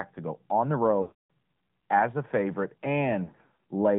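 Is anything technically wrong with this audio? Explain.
Yes, there are two problems. The whole clip runs through the AMR narrowband mobile codec, and there are two stretches of lost AMR speech frames.

The codec damage is plainly audible throughout. The band sits at roughly 150 Hz to 3.6 kHz, so nothing up top survives. The codec rebuilds the speech from a vocal-tract model fed with a handful of pulses per short subframe, which gives it that buzzy, slightly synthetic edge. The amount of damage fits a mid-rate mode of around 10 kbps.

The first dropout comes right after "to go on the", from 1.02 to 1.30 s. That's a solid 280 ms of missing frames. The decoder keeps repeating the last good pitch and filter settings at a falling gain, so the sound smears out and then fades to silence well before the gap ends. It comes back weak and a bit rough.

The second dropout, after "as a favorite", runs from 3.24 to 3.56 s. 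This time the losses are scattered rather than in one block: about 200 ms missing across roughly 400 ms, and no run longer than 40 ms. Each short loss gets patched with a brief warble or dip, so you hear choppy, wobbly stuttering rather than a clean fade-out.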